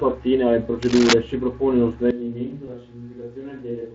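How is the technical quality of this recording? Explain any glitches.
The recording has three distinct faults, heard over the light Speex coding that runs throughout.

From 0.82 to 1.13 s there is cable scratch noise: dense, irregular crackling at about the level of the speech itself. This is likely a worn cable or connector being moved, its contact resistance fluctuating rapidly and injecting bursts of noise.

At 2.1 s the sound abruptly turns hollow, roomy and thinner in the bass. The level drops by about 10 dB, and room noise sits about 35 dB below the speech. This is a switch to a distant microphone, likely a fallback from a failed close mic, and it persists to the end of the clip.

From 2.65 to 2.75 s there is VoIP packet loss concealed by the speech codec. The decoder bridges the gap by extrapolating its last pitch and filter, which produces a brief, fading extrapolated sound. A single 20 ms frame was lost, and the speech stays weak or distorted for several frames afterwards while the decoder's state recovers.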